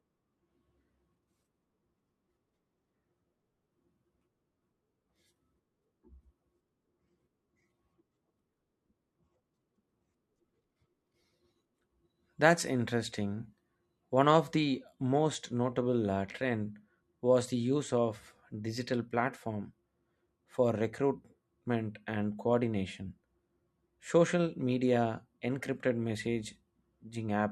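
Nothing in this speech recording stands out as a technical fault at any point, so there's nothing to flag here.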